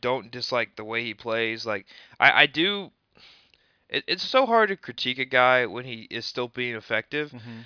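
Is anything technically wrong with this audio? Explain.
No, no technical faults heard.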